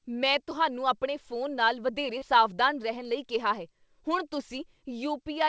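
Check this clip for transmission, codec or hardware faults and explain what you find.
One transmission fault is audible: a short concealed packet loss. From 2.18 to 2.23 s, right after "ਆਪਣੇ ਫੋਨ ਨਾਲ ਵਧੇਰੇ", about 40 ms of audio failed to reach the decoder in time. The receiver covered the gap with roughly 35 ms of sound extended from what came just before, then blended back into the real signal. This leaves a brief smeared wobble in the speech. Separately, the call path's band stops at 8 kHz, which fits a wideband call codec such as G.722.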